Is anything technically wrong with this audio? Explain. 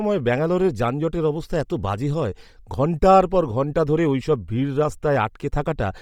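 Yes. Throughout the speech, heavy breathy, grainy texture in the upper band, likely Bluetooth LC3 compression at low bitrate, which discards high frequencies and substitutes filler noise.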